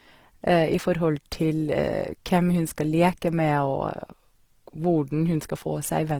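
Throughout, the speech sounds rough and grainy rather than swirling like MP3, with full bandwidth kept; likely Opus compression, fitting a low rate around 16 kbps.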